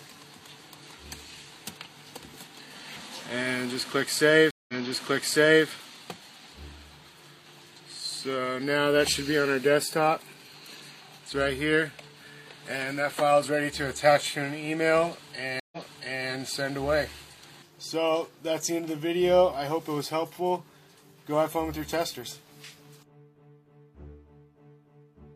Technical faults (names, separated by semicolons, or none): stream reconnect